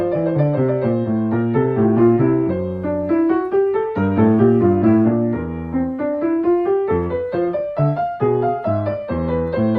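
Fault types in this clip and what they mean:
No technical faults can be heard anywhere in the audio.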